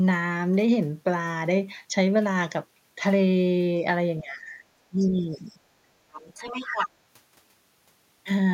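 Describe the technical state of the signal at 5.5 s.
Speech suppressed in double talk spans 4.89 to 5.61 s. The speech dips by as much as about 20 dB. The likely cause is an echo canceller that could not tell the near voice from loudspeaker echo while both sides talked, so it turned everything down.

The other side's voice leaking through appears briefly, from 5.50 to 5.54 s. It is a faint scrap, roughly 35 dB below the speech. The likely cause is loudspeaker sound reaching the microphone that the echo canceller failed to remove completely.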